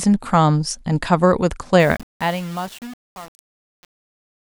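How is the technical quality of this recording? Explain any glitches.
The main problem is truncation distortion on a fade near the end of this speech clip. The fade-out starts around 1.8 s and runs to the end at 4.49 s. From 1.80 s to 4.49 s, though, the fading signal is stored with only about 7 bits and no dither. As the level drops, the waveform collapses onto a few coarse square steps, so the tail turns gritty and buzzy instead of trailing off cleanly.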